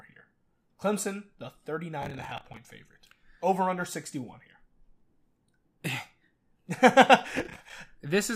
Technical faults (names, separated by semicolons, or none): processor overload crackle